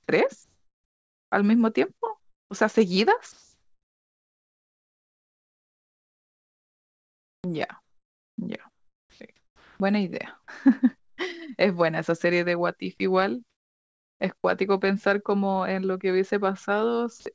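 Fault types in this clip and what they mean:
Comfort noise in place of the background: at 0.44–1.32, 8.70–9.20, 9.36–9.80 and 10.98–11.18 s the faint background becomes steady, featureless hiss, likely synthesized by the receiver while the sender paused transmission. It sits up to about 11 dB quieter.
Onset clipped by the voice detector: at 14.42–14.44 s, the first 20 ms of speech are missing. The detector likely reacted late, so the sound starts abruptly.
Sound dropped by the voice detector: at 17.20–17.26 s, about 30 ms of sound is likely mistaken for background and replaced with 60 ms of steady noise.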